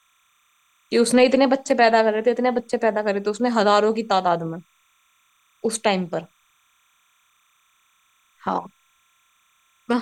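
Timecode bleed runs under the speech throughout. Linear timecode at 30 frames per second is leaking in, around 45 dB down, as a faint chirping warble. A spectrogram shows steady bands near 1 and 2 kHz, alternating rapidly; the waveform barely changes.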